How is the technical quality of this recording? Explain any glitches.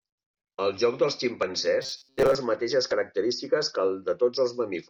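The recording has one clear glitch: robotic sound from repeated short buffers between 1.82 and 2.36 s. Through that half-second the speech becomes a rigid, metallic buzz at 133 Hz that loosely tracks the syllables. The likely cause is audio arriving too slowly, so playback fills the gaps by looping a fragment of about 7.5 ms. Most of the stretch is made of these repeats, and the looping imposes the fixed pitch while the real audio is skipped.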